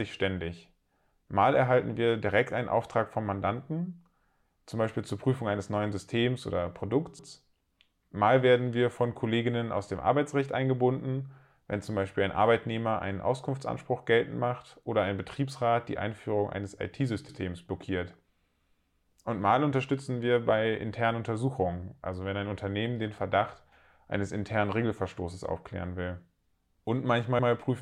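At 7.19 s, 17.29 s and 27.39 s the speech stutters briefly, each time for about 0.1 s. These are overlapping chunks: the audio was handled in 10-second blocks, and each new block begins 100 ms before the previous one finished, so that slice of speech is played twice at every join. The result is a short doubled fragment with a click, recurring every 10 s.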